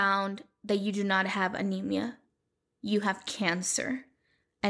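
Nothing stood out as a technical fault on listening to this speech recording.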